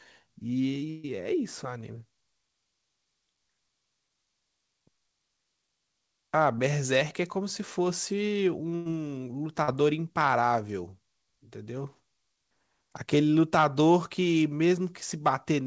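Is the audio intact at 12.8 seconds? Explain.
Yes, the audio is intact at 12.8 seconds, with nothing there beyond the ordinary band limit of the call path, which leaves no content above 8 kHz.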